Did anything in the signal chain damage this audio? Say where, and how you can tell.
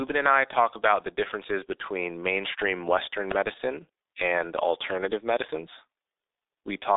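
Yes. At the codec stage the whole clip carries G.723.1 codec damage: nothing above 3.8 kHz, a narrow telephone band of about 300 Hz to 3.7 kHz, and a muffled, hoarse character with smeared consonants. That heavy damage points to a very low bitrate near 6.3 kbit/s.

At 3.31 s an impulse sits on top of the speech, only a couple of milliseconds long. That is an electrical switching spike, likely from a nearby switch or static discharge arcing and coupling into the analogue wiring as an added impulse.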